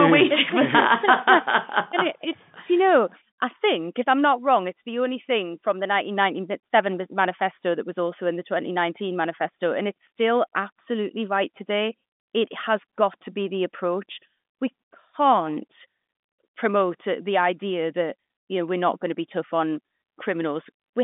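Nothing goes wrong anywhere in this speech recording. What you hear is a working G.711 telephone line, with the sound confined to a band of about 200 Hz to 3.6 kHz and nothing reaching above 3.7 kHz.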